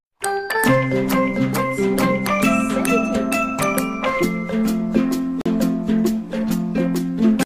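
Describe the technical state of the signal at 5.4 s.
At 5.41 s there's a gap between stream segments, a hard-edged hole of silence running to 5.46 s, about 43 ms. Two segments' timestamps don't quite meet, so the player pads the difference with silence. Nothing's actually lost; the sound just stops dead briefly.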